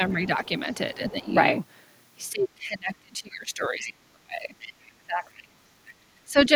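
From 0.09 to 1.29 s, a second voice leaks through under the speech. It sits around 25 dB below it. This is other side's voice leaking through. The likely cause is an echo canceller that left part of the loudspeaker signal in the microphone path.

From 0.96 to 1.35 s, the speech itself is pulled down. The drop reaches around 15 dB. About a third of a second is affected. This is speech suppressed in double talk. The canceller likely heard both sides at once and could not tell its own talker from the echo. So it lowered everything.

From 2.31 to 6.55 s, the same suppression returns for much longer. Dips reach around 30 dB. Roughly three seconds of that span lose level.

Inside this stretch, leakage appears again. It comes from 3.81 to 3.91 s at around 15 dB below the speech. It recurs from 4.6 to 5.34 s at around 20 dB below. A last scrap from 5.87 to 5.93 s sits around 25 dB below. Each is likely residual echo the canceller missed.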